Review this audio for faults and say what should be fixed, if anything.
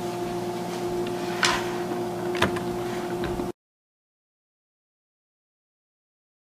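Nothing here needs fixing, as no faults turn up anywhere in this audio.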